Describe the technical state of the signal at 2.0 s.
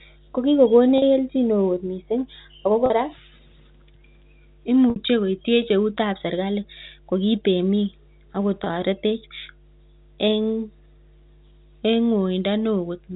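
Mains hum runs through the whole recording: a steady 50 Hz tone, roughly 30 dB under the speech, coupled in from the power line, showing as a constant bright low band on a spectrogram.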